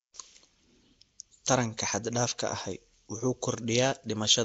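From start to finish the speech carries a rough, hissy halo and a smeared, underwater character, with nothing above 7.8 kHz. This is likely Nellymoser compression: coarse fixed-rate block coding that zeroes weak bands and refills them with noise, which fits a 32 kbps stream.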